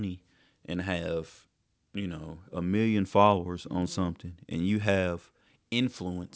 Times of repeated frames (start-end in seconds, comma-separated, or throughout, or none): none